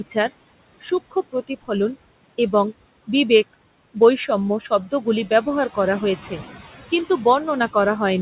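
Noise suppressor artifacts run through the whole speech clip. The suppressor estimates the steady room noise band by band and pulls it down by about 19 dB whenever the talker pauses, then lets it back up under the speech, so the background pumps in step with the talking. That breathing pattern tied to the speech sets it apart from a gate, which clamps the whole signal shut. The room noise sits about 17 dB under the speech, and the band stops at 4 kHz, which fits a narrowband call codec such as G.711 rather than the suppressor.

At 0.81 to 0.92 s comes speech cut by the noise suppressor. For roughly a tenth of a second the suppressor mistakes quiet speech energy for noise and lowers it along with the background, by about 14 dB at the deepest point. The sound goes faint and swallowed for that instant but does not stop, and the noise floor drops with it. A packet loss or dropout would leave a hard gap or a concealment buzz instead.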